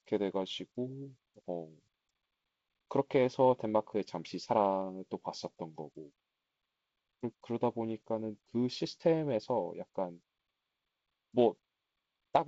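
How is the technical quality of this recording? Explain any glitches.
No glitches can be heard.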